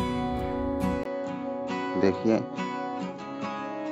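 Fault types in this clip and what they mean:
Input switched to a poorer device: from about 1.03 s the sound turns duller and a little quieter, most likely because recording moved to a lower-grade microphone or headset path. A 20 ms gap marks the switch. On a spectrogram, energy above 7.6 kHz disappears from that point to the end, leaving a hard ceiling, and a faint new noise floor, roughly 50 dB down, fills the gaps. The waveform shows a brief flat silence, then a step down of around 5 dB.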